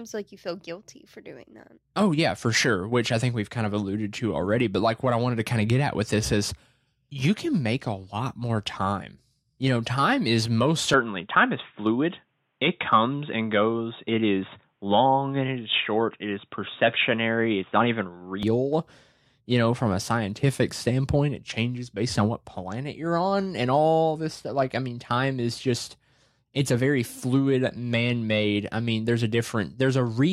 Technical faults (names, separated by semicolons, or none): input switched to a poorer device